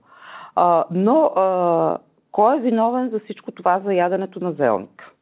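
Speech, with no technical faults to be heard.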